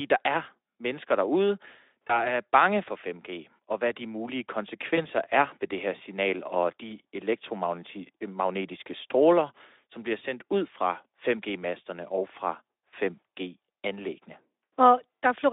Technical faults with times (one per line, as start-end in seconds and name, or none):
2.08-2.33 VoIP packet loss concealed by the speech codec
4.95-5.05 VoIP packet loss concealed by the speech codec